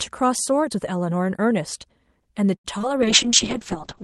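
At 2.55 s a short stall from a late packet holds the sound for about 89 ms, until 2.66 s, while the jitter buffer waits. Nothing is lost; playback resumes where it stopped. A spectrogram shows a smeared, frozen band of harmonics, and the waveform a brief repetitive stretch.

Short concealed packet loss follows back to back at 2.78 to 2.82 s and 2.82 to 2.85 s, each dropping about 20 ms that the decoder patched by extending the preceding sound. It is heard as a quick smear or wobble. Spectrally, these are thin blurred slivers with a faint seam at each edge.

From 3.01 s to the end, a call bitrate drop makes the audio turn rough and watery. The top band narrows from about 12 kHz to 8 kHz, which fits Opus falling from about 32 kbps to around 6 kbps. The spectrogram's upper region goes blank, with patchy, coarsely quantised detail below.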